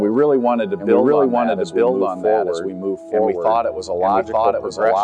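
The sound is doubled throughout. A second full-band copy trails the original by about one second, at about the same level. It carries no decay or room colour, so it does not read as an echo. It is a clean repeat layered on top. This is a doubled audio track. It is likely caused by the same signal being captured twice, once through a slower path, or by an edit that left two copies out of step.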